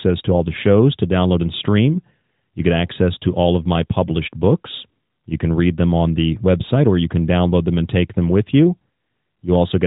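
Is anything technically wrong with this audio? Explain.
No, nothing technically wrong can be heard here.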